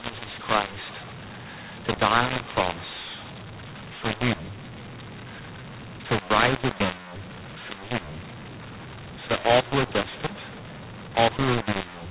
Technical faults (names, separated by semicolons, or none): mu-law and A-law mixed up